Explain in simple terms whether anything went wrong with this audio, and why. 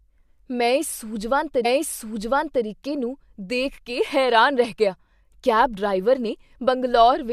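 Something did go wrong: a stream segment was repeated. Between 1.64 and 2.64 s, right after "ਮੈਂ ਇਸ ਸੂਝਵਾਨ", about one second of the speech plays a second time before the recording continues with "ਨੂੰ ਦੇਖ ਕੇ ਹੈਰਾਨ". A small blip marks the point where playback jumps back. This happens when the player fetches or queues the same chunk of the stream twice and plays both copies in a row, adding roughly a second to the clip.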